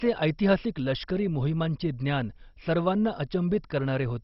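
From start to finish the speech sounds dull, with nothing above 5.6 kHz, and carries a gurgling, granular distortion as upper bands flicker. The likely cause is heavy MP2 compression at a very low bitrate, around 32 kbps, starving sub-bands of bits.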